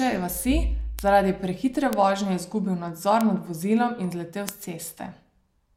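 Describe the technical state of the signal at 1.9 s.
At 1.93 s, just after "vasi zaradi prehitre", a bit error spike occurs: a single flipped bit throws one sample to about -3 dBFS, a power-of-two jump, before it returns immediately. The result is one sharp, broadband tick unrelated to the speech.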